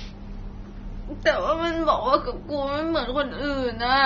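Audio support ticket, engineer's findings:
Dull, smeared speech for the whole clip, nothing above about 6.9 kHz, plus a fizzy, warbly edge on sibilants. Likely AAC compression (AAC-LC) starved of bits, consistent with roughly 24 kbps: encoder dropped the top band and coarsely quantised what's left.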